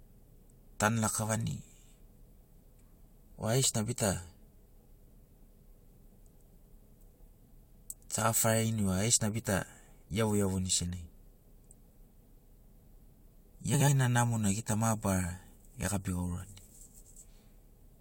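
At 13.73 to 13.89 s, just before "ḡena namona ḡita", frames out of order: two adjacent runs of roughly 70 ms, which fits three frames each, were decoded swapped. The stretch plays halves exchanged, a garbled flutter, and no time lost.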